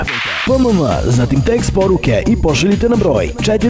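Nothing stood out on listening; the audio comes across as a normal call path with no content above about 8 kHz.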